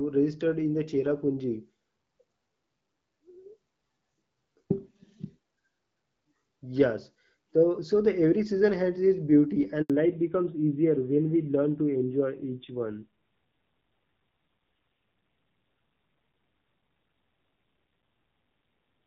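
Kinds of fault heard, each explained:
Handover gap: At 9.82 s the speech cuts out abruptly, dying away within a few tens of milliseconds, leaving a hole of silence about 80 ms long before sound returns at 9.90 s. The call is being passed from one network to another, and while the switch happens no speech frames reach the listener. Whatever was said in that short window is lost outright rather than delayed or repeated.
Fallback to narrowband: From 9.90 s to the end the speech sounds noticeably duller and boxier, with a rougher, grittier texture. Nothing is left above 4 kHz. Before this point the HD Voice wideband codec carried clear speech with only light coding wear. Right after the handover the call dropped to an older narrowband codec. The extra roughness fits a low-rate AMR-NB mode around 7.4 kbit/s.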